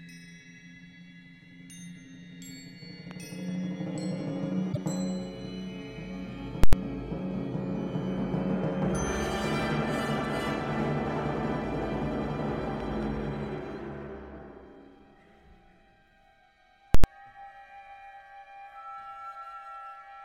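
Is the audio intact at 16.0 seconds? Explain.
Yes, at 16.0 seconds the audio is intact, with no dropout, click, distortion or other fault at that point.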